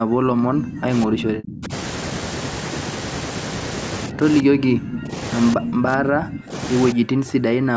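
An echo canceller that likely could not tell the near talker from loudspeaker echo while both sides spoke at once turns the speech down in five stretches: speech suppressed in double talk. It runs from the start to 1.72 s, dipping by about 35 dB, then briefly at 4.08 to 4.25 s by about 15 dB, at 4.42 to 5.15 s and 5.56 to 6.55 s by about 30 dB, and from 6.93 s to the end by about 40 dB. The speech, already limited to 8 kHz by the call processing, sinks or breaks up in pieces during these stretches.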